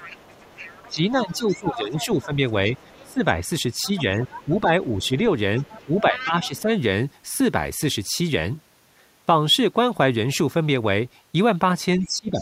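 Right from the start, 0 to 3.14 s, there's the other side's voice leaking through, sitting roughly 20 dB under the talker. It's most likely loudspeaker pickup the echo canceller didn't fully strip out. From 0.88 to 3.24 s you also get speech suppressed in double talk: with both voices present, the canceller likely couldn't tell them apart and ducked everything, so the talker dips by up to about 15 dB in patches adding up to around a second and a half.

The leak comes back from 3.83 to 6.6 s, a bit louder this time at roughly 15 dB below the talker, and the same likely cause applies. The suppression tags along with it. From 3.86 to 5.09 s it's a light dip of about 5 dB that's only briefly noticeable. Then from 5.85 to 6.73 s it's firmer, pulling the voice down about 10 dB for roughly half a second.

Right at the tail, the suppression returns from 11.98 s to the end, with drops around 15 dB over a short stretch. 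The leaked voice joins at 12.03 s, faint at about 25 dB down. Both are again likely the canceller struggling with simultaneous talk.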